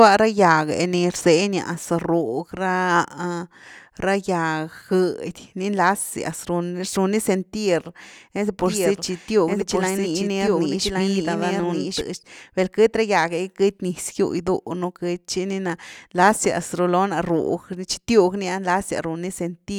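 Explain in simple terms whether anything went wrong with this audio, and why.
A doubled audio track runs from 8.65 to 12.01 seconds. During that stretch, a second copy of the same speech plays about a second behind the first, a little quieter, so everything is heard twice, overlapping itself. The copy sounds just as clear and dry as the original, with no room echo, and it switches on and off suddenly. The likely cause is the audio being picked up again through a slower route, or an edit leaving two misaligned copies.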